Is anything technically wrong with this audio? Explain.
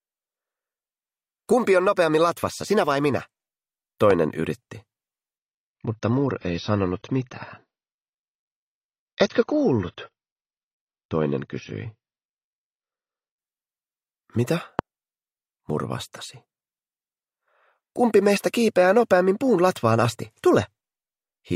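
Yes, there are two kinds of fault: three loud pops and a stretch where an adaptive stream drops to a lower bitrate.

Loud pops occur at 4.11 to 4.13 s, 14.79 to 14.81 s and 20.05 to 20.07 s, each about 21 ms long. The first and third peak at about 15 dB above the surrounding sound, the second at about 20 dB. Each is a single sharp pulse laid over the audio, which continues uninterrupted beneath it. The likely cause is a transient voltage step, such as a connector, switch, static discharge or driver glitch, that the downstream circuitry shapes into a brief thump.

An adaptive stream at a lower bitrate runs from 5.38 to 13.38 s. At 5.38 s the quality drops abruptly with no gap. Nothing above 6.6 kHz remains, and coding artefacts become more audible. At 13.38 s full bandwidth returns just as suddenly. The dull, band-limited character points to the player switching from an AAC stream near 96 kbit/s to one around 28 kbit/s while the connection slowed.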